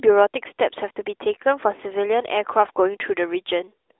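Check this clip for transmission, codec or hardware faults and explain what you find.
No transmission, codec or hardware faults turn up in this speech clip. The AMR narrowband mobile codec path can be heard doing its normal job: the sound sits in a telephone band of roughly 300 Hz to 3.6 kHz, with nothing above 3.8 kHz and only light codec colouring.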